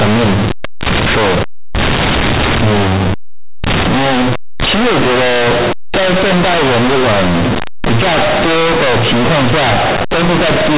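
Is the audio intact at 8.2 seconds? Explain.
No. At 8.2 seconds the speech is still affected by companded audio read as linear, a fault that runs through the whole clip. A-law telephone bytes are being played back as plain linear 8-bit samples without expansion. Each sign change throws the output across roughly half its range, so soft and loud parts come out at similar, excessive levels. The result is loud, buzzy distortion with heavy noise in the pauses. On a waveform the signal looks bent out of shape, with large swings even in gaps. A spectrogram shows broadband noise filling the band up to 4 kHz, where the A-law telephone coding cuts off.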